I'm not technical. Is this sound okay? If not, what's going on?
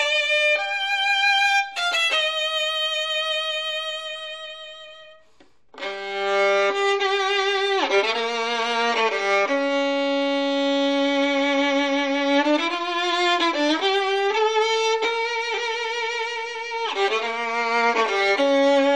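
Yes, this one's fine: nothing in it sounds broken or glitchy, so there's nothing here you need to worry about.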